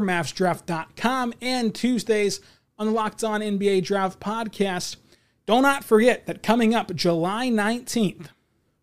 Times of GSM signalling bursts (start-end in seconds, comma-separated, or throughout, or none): none